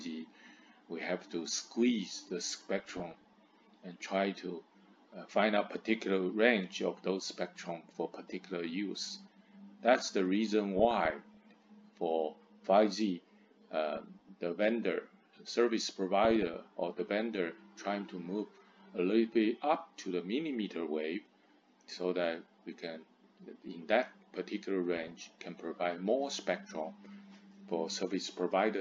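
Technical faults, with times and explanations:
2.79–3.34, 10.77–11.37, 13.97–14.29, 16.20–16.61 and 24.96–25.12 s, DAB burbling: bit errors under about one percent slip past error correction, so single MP2 sub-bands jump in level for up to a frame at a time, producing short bursts of burbling noise. On a spectrogram these appear as scattered short rectangular patches in narrow bands.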